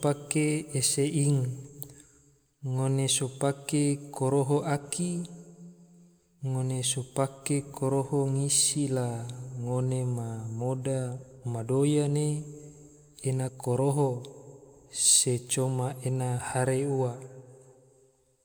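Speech recording with no technical faults detected.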